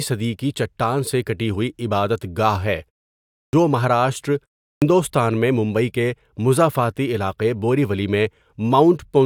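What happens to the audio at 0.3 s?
Nothing goes wrong at 0.3 s; the speech there comes through intact, with no dropout, glitch or distortion.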